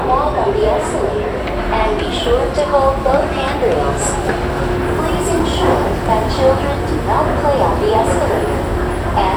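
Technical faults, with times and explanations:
5.40 s and 6.74 s, underrun with held sample: the output buffer ran dry twice, for about 4.4 ms and then 1.5 ms (the second fits a 64-sample shortfall), and the converter held its last value, so the waveform goes flat. No audio was lost, so playback resumes where it stopped and the join is soft. That separates it from a dropout to silence, which falls to zero, and from a glitch that skips audio and leaves a sharp click.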